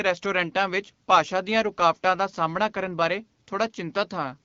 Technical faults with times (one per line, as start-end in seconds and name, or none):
none